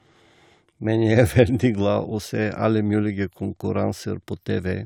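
No technical faults are audible anywhere in the speech.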